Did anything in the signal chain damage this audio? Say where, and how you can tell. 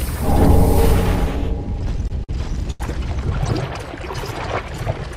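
Yes. Between 1.81 and 2.31 s the sound drags and stutters, catching five times with the last sound held on, the longest hold 50 ms and 94 ms in all, 19% of that span. These are repeated stalls (stutter) at the network stage: packets arrived late, the jitter buffer kept emptying, and the receiver filled each gap.

From 2.71 to 2.82 s a single sound is held too long, about 89 ms, with a slight buzz or dip before it resumes with nothing lost. This is a short stall from a late packet. Delay jumped by 89 ms, the jitter buffer ran dry, and the receiver stretched the last sound until the packet arrived.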